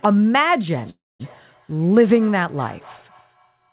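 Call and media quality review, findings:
Feedback echo between two devices, 0.77 s to end of clip: faint repeated copies of the speech about every 200 ms, at most about 26 dB below it. The far device plays the audio back into a nearby microphone, outside its echo canceller. Spectrogram shows stacked, thinning ghost traces.

Call audio freeze, 0.90–1.22 s: the sound holds as a brief fading buzz, then about 220 ms of silence, then resumes where it stopped with nothing lost, adding 295 ms of delay. Likely late packets draining the jitter buffer. Waveform shows a flat gap.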